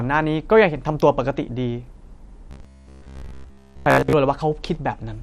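Throughout the speech, the sound is dull and granular in a way that likely comes from MP2 compression at a low bitrate, which fits a stream of around 80 kbps. With too few bits to go around, the encoder drops the upper sub-bands and quantises the rest coarsely, so the high end is missing and a gurgling roughness sits on every syllable. The damage is plainly audible from start to finish.

At 1.9 s, a brief DAB burbling event appears. Bit errors have slipped past the error correction into a single audio frame. Corrupted samples put short blips of noise into single sub-bands, and corrupted scale factors can make a sub-band jump in level for that frame alone, producing a short watery blip over the speech rather than a sustained disturbance.

From 2.51 s to 4.15 s, the speech turns into a rigid, metallic buzz at about 67 Hz. This is robotic sound from repeated short buffers, likely caused by fresh audio arriving too slowly, so playback keeps looping the last chunk of about 15 ms. 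Most of the sound in this stretch is repeated material rather than new audio. The fixed repetition rate imposes that pitch, and the speech only loosely follows underneath it.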